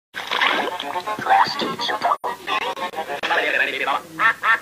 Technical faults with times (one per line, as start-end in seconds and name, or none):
2.15-2.24 AAC frame loss with muting